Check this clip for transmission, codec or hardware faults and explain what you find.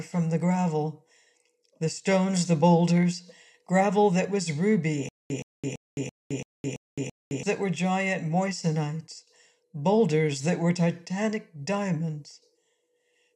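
One fault stands out: a stutter with silent gaps from 5.09 s to 7.43 s. A 121 ms fragment repeats seven times, each followed by 214 ms of dead silence, giving an even 335 ms cycle. The likely cause is a stalled player or stream replaying its last buffer on each retry before running empty. On a waveform it looks like identical blocks separated by flat lines, and on a spectrogram like repeated vertical stripes with blank gaps between them.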